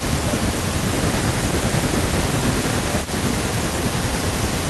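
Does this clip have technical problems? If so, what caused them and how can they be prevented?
Yes. The speech dips in level from 0.0 to 0.81 s, 1.05 to 1.32 s, and 1.87 s to the end, by about 10 to 15 dB. This is likely speech suppressed in double talk: the echo canceller attenuated the near talker during overlap. Use a canceller with better double-talk detection and encourage turn-taking.

From 3.02 s onward, a delayed copy trails the speech by 326 ms at about 15 dB below it. This is likely echo leak from a speakerphone whose canceller didn't fully remove the loudspeaker pickup. Use a headset or lower the loudspeaker volume.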